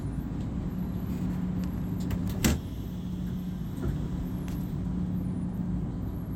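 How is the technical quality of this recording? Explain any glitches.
No technical glitches can be heard in this recording.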